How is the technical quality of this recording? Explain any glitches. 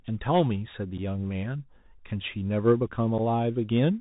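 The recording is poor in quality. It sounds narrowband and gritty throughout, with two brief dropouts.

The whole clip sounds boxed-in and thin, as though heard down a phone line, with nothing above 4 kHz. A fine granular hiss sits under the speech, s sounds come through scratchy, and loud high-frequency moments distort plainly. This is the Bluetooth CVSD headset codec at 64 kbps. It encodes each sample as a single up-or-down bit with an adaptive step, so the waveform is roughly approximated and fast changes outrun the step.

At 0.98 to 1.00 s and again at 3.18 s, the speech briefly drops out with abrupt edges that can click, and it returns quieter for a moment. Each hole lasts about 7.5 ms. This is unconcealed Bluetooth headset packet loss. Each time, what sounds like a single voice packet between headset and phone went missing, and nothing reconstructed the gap, leaving silence or an idle pattern in its place.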